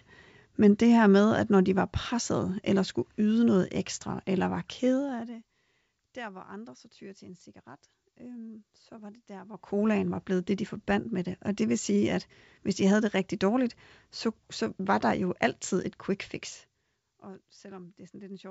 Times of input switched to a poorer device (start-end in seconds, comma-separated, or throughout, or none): none